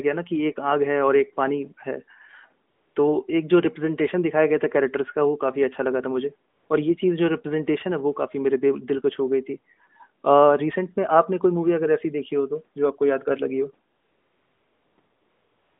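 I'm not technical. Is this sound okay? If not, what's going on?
No. In four pauses the background is swapped for a smooth, even hiss that switches on and off: 2.70 to 2.96 s, 6.50 to 6.70 s, 13.96 to 14.98 s, and 15.00 s to the end. This is AMR comfort noise. The phone decided nobody was talking, stopped sending the real sound, and the receiving end filled the gap with artificial noise matched only roughly to the room, so the real background briefly disappears.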